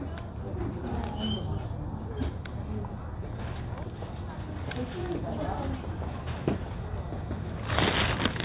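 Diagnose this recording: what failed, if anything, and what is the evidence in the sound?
Nothing in the signal chain failed: the sounds arrive with no breaks in the waveform, and no distortion or disturbance anywhere in the recording.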